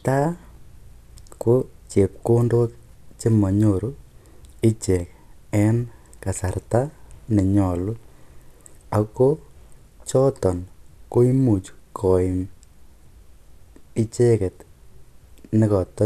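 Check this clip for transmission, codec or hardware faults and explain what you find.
No transmission, codec or hardware faults can be heard in this speech recording, and the signal comes through technically intact.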